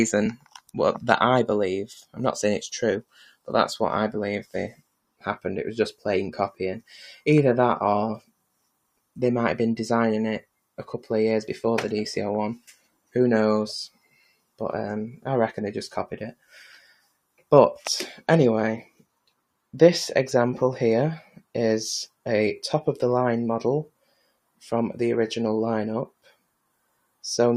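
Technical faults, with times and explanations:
throughout: noise suppressor applied to music or sounds. A suppressor tuned for speech stays active across the whole clip. It treats held tones, ambience and reverb as noise and keeps pulling them down. Its gain moves by roughly 5 dB as it reacts. Attacks pass largely intact, but sustained parts and tails sink. The result is a pumping, fluttering quality, and the sound thins out between onsets.
0.37–10.67 s, 12.59–14.6 s, 16.34–22.26 s, 23.88–27.23 s: sound cut by the noise suppressor. In these spans the suppressor misreads parts of the sound as noise and cuts them harder than the rest. The deepest drops reach about 20 to 21 dB. Only part of each span is hit: around two seconds in total in the first, third and fourth, and about one second in the second. Steady and decaying sounds drop away or end early, while sudden ones come through.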